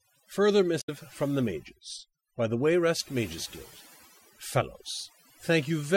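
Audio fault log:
throughout: overdone noise removal. Bands near the noise estimate are pulled down hard, leaving a lowered background with twinkling specks.
0.77–0.89 s: damaged data in a compressed stream. Corrupted frames make the decoder lose sync and hunt for the next header, giving a brief glitch.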